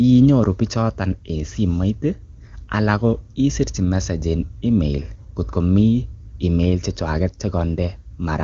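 No faults are audible in the speech, and the band ending at 7.1 kHz fits the AMR wideband (HD Voice) codec at its top rate of about 23.85 kbit/s, running as a normal path.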